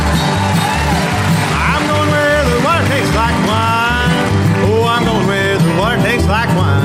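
A crude rate conversion runs through the whole clip. A gritty, inharmonic fizz rides on the sound, strongest on loud and bright passages, and sits roughly 25 dB below the signal. The conversion appears to have repeated the nearest sample instead of filtering, which fits a change from 44.1 kHz to 48 kHz. On a spectrogram, faint mirrored partials unrelated to the real harmonics track the louder content. The waveform shows small flat steps where samples repeat in a regular pattern.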